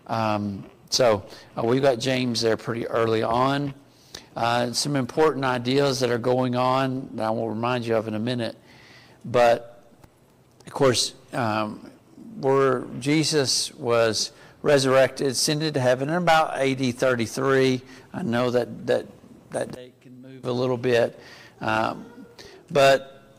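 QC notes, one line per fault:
No faults found in this audio. Nothing needs logging at any point in the clip.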